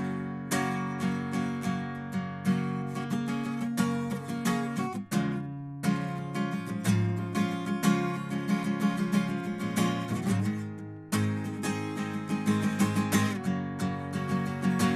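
No technical faults are audible anywhere in this music clip.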